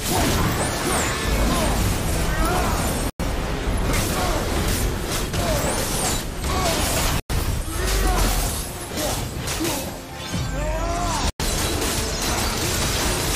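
The audio has a gap between chunks at three points: 3.10 to 3.20 s, 7.20 to 7.30 s and 11.30 to 11.40 s. Each hole is 100 ms of silence after a 4 s block, so the sound stops dead and then resumes exactly where it left off, with nothing missing. On a waveform these are flat, silent stretches with abrupt edges. A spectrogram shows clean, full-band vertical blank stripes spaced about 4.1 s apart.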